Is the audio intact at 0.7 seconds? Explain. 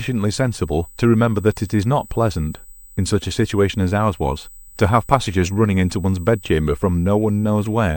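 No. At 0.7 seconds the speech carries a USB whine, and it runs through the whole clip. It is a steady, fixed-pitch tone at 8 kHz, strongest at its harmonic near 16 kHz. It sits roughly 25 dB below the speech, heard as a thin, high whistle. The USB bus pulls current in 125-microsecond microframes. That ripple leaks into the audio path through power or ground.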